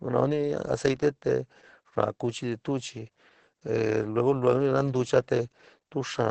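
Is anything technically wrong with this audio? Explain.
Yes. Opus voice compression runs throughout: a linear-prediction SILK coder leaves nothing above 8.7 kHz and renders the speech hoarse and robotic, which fits roughly 10 kbps, unlike plain low-pass muffling.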